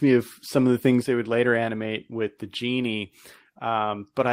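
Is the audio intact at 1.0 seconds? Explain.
No. Just after 1.02 s, between "of some of the" and "they would later animate", there is a microphone volume stepped down event: the call software likely judged the input too hot and cut the device's capture level in a single move. The speech and the background beneath it drop together by about 5 dB at that instant, an abrupt step down in loudness rather than a gradual fade.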